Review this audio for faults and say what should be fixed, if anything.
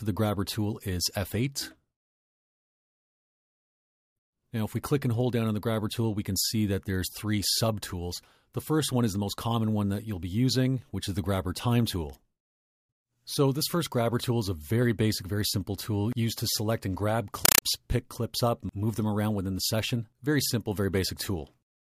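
A compressed stream played as audio appears from 17.45 to 17.62 s. Undecoded AC-3 data was taken for ordinary samples. Each frame becomes a 5.33 ms burst of noise followed by a gap, repeating at 31.25 Hz. This gives chattering static in place of the sound. The pattern fits a 256 kbps stream. To prevent it, set the receiving device to decode bitstream input, or have the source send PCM.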